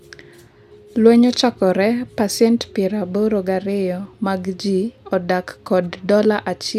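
No technical faults can be heard in the recording. The speech runs for about 6.8 seconds without any technical interruption.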